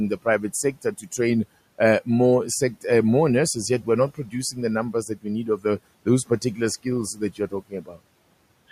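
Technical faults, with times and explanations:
0.63–0.85 s, 1.01–1.19 s, 4.15–4.34 s, 4.93–5.26 s, 5.47–5.65 s and 7.14–8.0 s, speech cut by the noise suppressor: parts of the speech suddenly sound swallowed and faint, dipping by about 11 to 18 dB. Each of the first five dips is brief, about a tenth of a second, while the last stretch loses nearly half a second. The suppressor mistook these quieter speech parts for the room noise, which sits about 25 dB below the speech, and turned them down with it.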